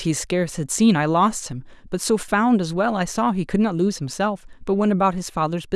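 At 2.23 s the speech level drops abruptly by about 6 dB and recovers at 2.28 s, a brief dip of roughly 50 ms. The likely cause is one channel dropping out, so the mono sum briefly carries only the remaining side.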